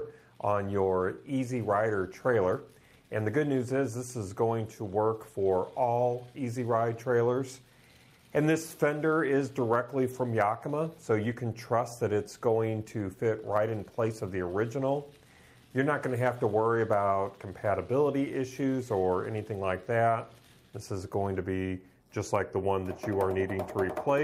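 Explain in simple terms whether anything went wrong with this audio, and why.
Nothing went wrong here, as far as anyone listening could tell; it all sounds just the way it should.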